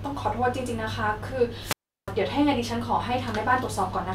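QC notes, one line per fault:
1.60–2.14 s wireless microphone squelch dropout: the FM radio link fades, hiss swells, then the receiver's squelch mutes the output for 351 ms before the speech returns. The static rising just ahead of the silence distinguishes it from a digital dropout or a clean edit gap.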